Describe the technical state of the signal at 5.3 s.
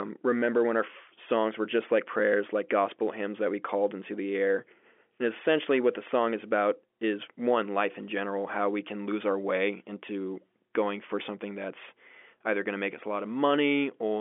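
At 5.3 s the speech is intact, carrying only the narrow telephone band of its G.711 line, with nothing audible above roughly 3.6 kHz.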